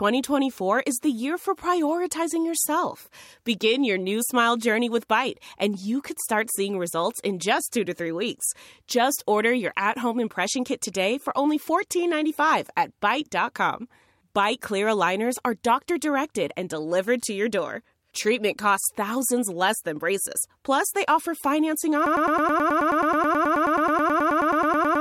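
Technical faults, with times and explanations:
22.06–25.01 s, broken-record loop: likely a stall in the player, encoder or stream, which kept resending the last fragment it held. Right after "they offer financing", a 107 ms slice of speech repeats back to back about 28 times until the clip ends, replacing whatever should have followed.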